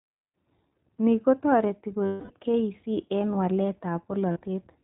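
Right from the start the whole speech clip runs through the iLBC codec, and the damage is plainly audible. Nothing gets through above 4 kHz, and the voice comes out clear but slightly rough and synthetic. The texture fits the 20 ms frame, 15.2 kbps mode.

At 2.06 s there's a stretch of lost iLBC frames lasting about 240 ms, to 2.32 s. The decoder covers the hole by repeating the last pitch cycle with noise mixed in, so it turns into a held, buzzy vowel that fades out. A second, shorter loss of about 40 ms at 4.32 to 4.38 s gives just a brief buzz. Both times the voice snaps back almost immediately because each frame decodes independently.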